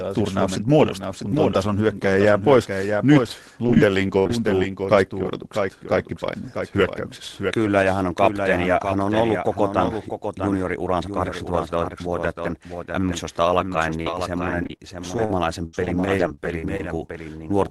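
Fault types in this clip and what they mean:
Doubled audio track: a second full-band copy trails the speech by about 0.7 s, a few dB quieter, likely from a slower duplicate capture path.
Repeated packet loss (robotic sound): short gaps patched by extending the last sound make it choppy, just before "kaikki odotukset kaikki paineet" and after "mm alkaen".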